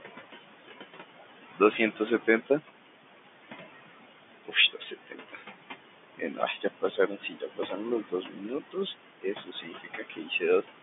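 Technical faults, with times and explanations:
Throughout, noise suppressor artifacts: the room noise, about 12 dB under the speech, is pulled down by about 18 dB in the gaps and swells back beneath the speech. A spectrogram shows the noise floor pumping between dark pauses and hazy, speckled patches under speech.
4.32–4.56 s, 4.72–5.43 s, 6.15–6.65 s, 6.81–8.78 s and 9.21–10.43 s, speech cut by the noise suppressor: quiet parts of the speech were mistaken for noise and turned down by up to about 17–21 dB. That amounts to about a tenth of a second in the first stretch and about a second in the longest. Soft consonants and endings sound swallowed. The waveform shows abrupt envelope dips, and the spectrogram shows faint consonant energy erased into dark notches.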